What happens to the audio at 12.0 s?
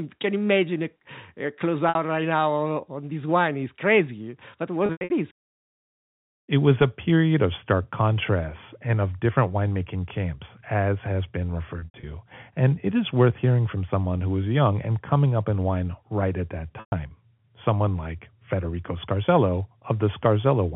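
The speech briefly turns into a held, buzzy tone that thins into a short silence between 11.79 and 12.03 s. This is packet loss with pitch repetition: about 150 ms went missing across that span, and the receiver repeated the last pitch period, fading it out over roughly 50 ms. The longest 90 ms gap outlasts that fade before the speech cross-fades back.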